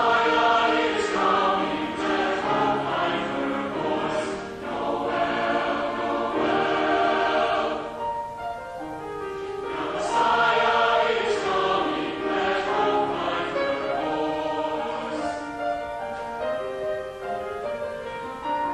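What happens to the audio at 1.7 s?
Nothing goes wrong at 1.7 s; the audio plays through that moment intact, with no dropout, click or distortion.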